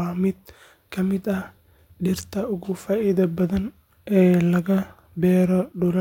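No technical faults can be heard anywhere in the speech recording, and the signal stays steady and continuous throughout.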